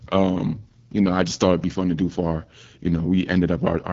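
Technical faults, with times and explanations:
Throughout, AMR wideband (HD Voice) codec: rough, raspy speech with nothing above 7.4 kHz, fitting a low 8.85 kbit/s mode with too few pulses to model the voice.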